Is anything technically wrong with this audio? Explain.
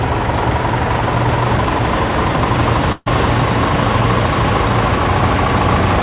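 Yes. From 2.92 to 3.08 s there is a burst of packet loss. About 140 ms of audio never arrived in time, so the receiver filled the gap by extending and steadily fading the last sound it had. Voiced material turns into a held buzz and noisier material into a dying hiss. Playback then resumes with that stretch skipped. This differs from a plain dropout because there is no silence, and from a single lost packet because the concealment runs for well over 100 ms. Throughout the clip, nothing reaches above 4 kHz, which fits the G.711 mu-law codec at 64 kbps on a call path.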